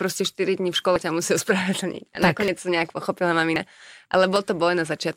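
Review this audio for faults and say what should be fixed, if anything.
Small jumps forward in the speech occur at 0.96 s (between "dní v škole" and "ťa musí ospravedlniť"), 2.48 s (just before "to nejak pochopila"), 3.56 s (right after "to nejak pochopila") and 4.36 s. Each skips roughly 40 ms, and the likely cause is a dropped buffer (overrun), where the hardware overwrote samples before the program read them. Giving the capture thread higher priority or using larger buffers would prevent this.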